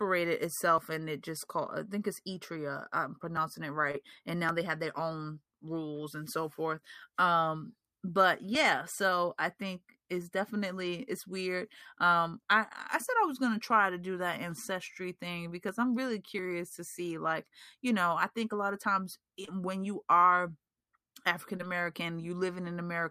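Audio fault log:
3.91–3.95 s, 13.05–13.09 s, 19.45–19.49 s, 21.57–21.61 s: short concealed packet loss. Each time about 20 ms went missing and was filled by extending the preceding sound, causing a brief smear. On a spectrogram it shows as a stretched harmonic or noise patch, and the waveform has a small seam where the fill rejoins.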